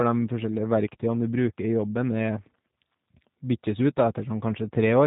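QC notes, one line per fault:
Throughout: G.729 codec, speech resynthesised from filter, pitch and pulse parameters, plainly rough and synthetic, nothing above 3.8 kHz; fits 8 kbit/s.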